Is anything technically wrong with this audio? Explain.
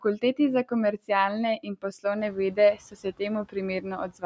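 Yes, there's one problem. Between 2.75 and 3.21 s there's speech cut by the noise suppressor. The room noise rises by about 16 dB around 2 s, and the suppressor then mistakes some quieter speech for background and turns it down by up to about 15 dB. That's roughly 150 ms in all, and those bits sound swallowed and faint.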